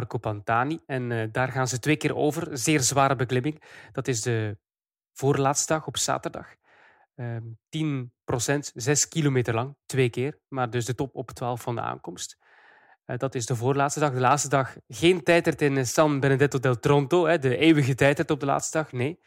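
A brief crackle on a loud peak from 14.27 to 14.33 s, just before "dag geen", is hard clipping: the speech briefly exceeded what a stage could pass by about 1 dB, so the waveform tops were cut flat, adding harsh high harmonics for about 60 ms.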